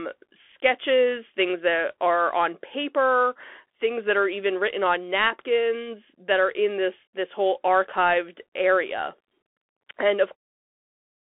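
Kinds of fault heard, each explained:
Bluetooth CVSD headset codec: The whole clip has passed through a one-bit delta modulator running at 64 kbps, where each sample only nudges the level up or down by an adapting step, so the speech is confined to a telephone-like band of roughly 300 Hz to 3.4 kHz with nothing above 3.8 kHz. The damage is plainly audible: loud high-frequency moments overrun the step size and distort, sibilants sound scratchy, and a grainy hiss sits beneath the speech. A spectrogram shows a hard ceiling near 3.8 kHz and a speckled noise floor across the passband.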